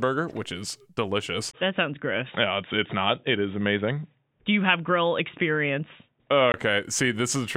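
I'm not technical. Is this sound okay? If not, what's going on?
No. Right after "which is delicious", at about 1.51 seconds, the sound suddenly turns dull and boxy, as if heard through a cheap headset, and stays that way until about 6.54 seconds, when it clears up again. This is an input switched to a poorer device, most likely the recording jumping to a different microphone or a headset's call mode. That device keeps nothing above about 3.8 kHz, so the crisp top end vanishes. A faint new background hiss comes in with it, and there's a tiny gap of silence at the switch. The loudness stays the same. The abrupt change, that tiny gap and the changed background are what set this apart from a simple tone-control change.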